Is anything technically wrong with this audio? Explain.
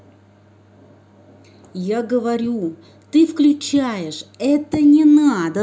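No, nothing is technically wrong with this speech recording. No fault can be heard anywhere in it.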